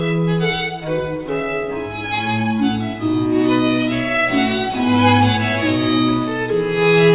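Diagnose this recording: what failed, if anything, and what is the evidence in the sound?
Aliasing from a sample-rate conversion runs through the whole clip. Content above 4 kHz folds back as fairly strong, unrelated gritty tones, and the spectrum runs hard up to that edge. This fits a drop to an 8 kHz rate without anti-alias filtering, unlike a clean band-limit.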